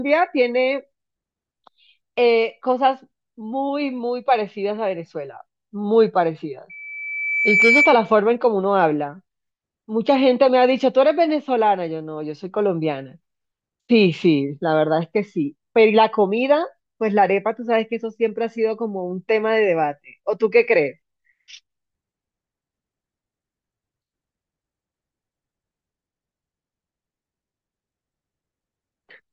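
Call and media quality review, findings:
Loudspeaker feedback squeal, 6.69–8.14 s. Single tone at 2.3 kHz swelling over about a second to a few dB above the speech. Probable component: open mic picking up its own loudspeaker, loop gain above one at that frequency. Unlike a steady interfering tone, it builds from nothing, then stops.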